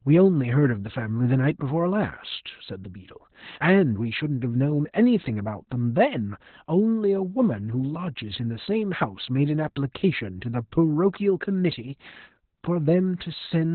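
Opus voice compression, heavy, runs throughout the speech. Nothing is left above 4.3 kHz, pointing to the SILK coder in narrowband mode at a very low rate, around 8 kbps, with coarse excitation that makes the voice muffled, hoarse and slightly robotic.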